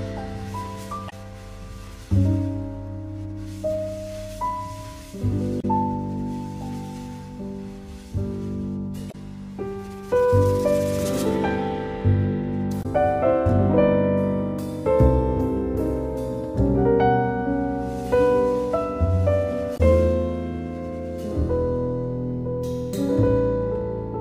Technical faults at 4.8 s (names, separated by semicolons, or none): none